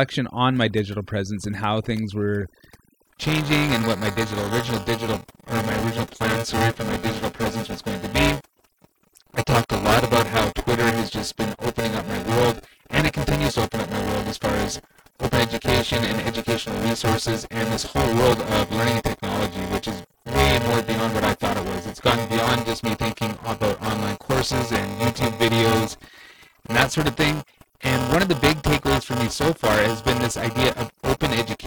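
The background of this whole speech recording is pushed to near silence and flecked with twinkling specks. This is overdone noise removal. The reduction was set far too aggressively, so any frequency band sitting close to its noise estimate gets cut hard or switched off, and the softer parts of the voice are stripped away along with the noise. From 3.05 s to the end, a robotic buzz at about 345 Hz rides on the voice and drops away whenever the speech pauses. That is buffer tearing. The software filling a ring buffer and the hardware draining it have drifted out of step and cross inside every period. Roughly a third of each buffer replays audio from a few milliseconds earlier, with a hard seam at each edge. The buzz rate points to a buffer of about 128 samples.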